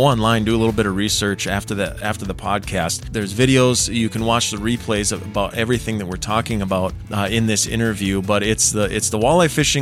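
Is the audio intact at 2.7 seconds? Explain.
Yes, the audio is intact at 2.7 seconds, with no dropout, glitch or other fault at that moment.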